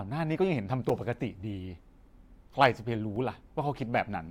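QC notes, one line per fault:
0.89 s and 3.16 s, block of digital silence: the speech drops to silence for about 5.3 ms and then 2.7 ms, which fits blocks of 256 and 128 samples left unfilled when the output buffer was not written in time. The signal cuts out and back with no fade, so each gap is heard as a tick or dip rather than as silence. That abrupt, silent hole sets it apart from a fade-style dropout or a single-sample click.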